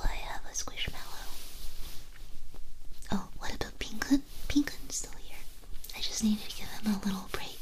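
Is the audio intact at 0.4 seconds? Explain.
Yes, the audio is intact at 0.4 seconds, with no dropout, click, distortion or other fault audible at that point.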